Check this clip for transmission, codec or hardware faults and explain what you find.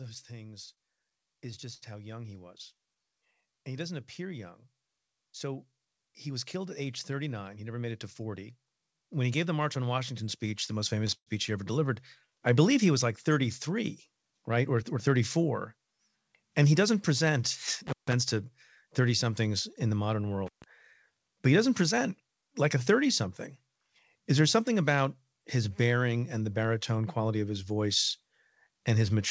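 The speech has three kinds of jitter-buffer trouble and two brief contact dropouts, all heard over a wideband call path whose band stops at 8 kHz, which fits G.722 at 64 kbps.

Repeated stalls (stutter) run from 0.66 to 2.74 s and again from 11.02 to 11.29 s. The first stretch drags and catches through eleven short hitches, none longer than 70 ms, with about 173 ms stretched out in all. The second has three hitches, one lasting 124 ms, and over half of that quarter-second is filled-in sound. Packets arrived late, the buffer ran dry, and the receiver kept extending the last sound until data returned. Nothing is lost, only delayed.

A jitter buffer slow-down follows directly, from 2.75 to 3.60 s. The speech plays at about 90% speed with unchanged pitch, drawn out by roughly 92 ms. With its reserve depleted after the stalls, the receiver repeated single pitch periods to rebuild a cushion.

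A jitter buffer speed-up appears three times: 5.65 to 6.55 s at about 109% speed, 14.35 to 15.08 s at 108%, and 21.93 to 23.22 s, just after "but he doesn't", at 106%. Each sounds briefly hurried without a pitch rise. The buffer held excess audio, so it trimmed small pitch-period slices, roughly a tenth of a second in the first and last spans and less in the middle one.

Intermittent contact cuts the sound at 17.87 to 18.13 s, open for about 147 ms, and at 20.46 to 20.64 s, right after "somethings in the modern", open for about 137 ms. Each dropout has crackle at its edges and only faint residue between them, the mark of a loose cable or plug briefly breaking the connection.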